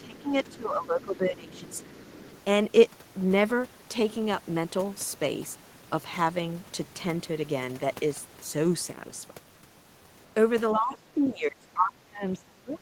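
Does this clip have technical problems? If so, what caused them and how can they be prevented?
Yes. There is faint other side's voice leaking through at 0.0–0.21 s, 1.57–1.78 s and 2.09–2.38 s, roughly 25 to 30 dB below the talker. The likely cause is loudspeaker echo that the echo canceller left behind. On a spectrogram it appears as weak harmonic traces. Prevention: use a headset, or give the canceller a longer filter and better far-end reference alignment.

There is also speech suppressed in double talk from 0.0 to 2.08 s, with a drop of around 15 dB, and from 10.75 s to the end, with a drop of around 25 dB. The talker's level dips, likely because the canceller turned everything down while both sides spoke. The waveform shows a shrunken envelope. Prevention: use stronger double-talk detection so suppression only engages on echo alone.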